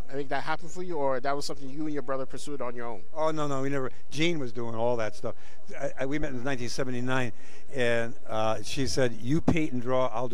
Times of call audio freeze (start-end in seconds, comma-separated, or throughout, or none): none